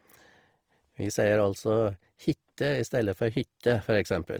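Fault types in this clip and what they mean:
Opus compression: Throughout, the speech sounds grainy and rough, with plainly audible noisy texture where clean detail should be, though the top end still reaches 20.3 kHz. Likely Opus in music mode at around 24 kbps, filling starved bands with folded or noise-like content.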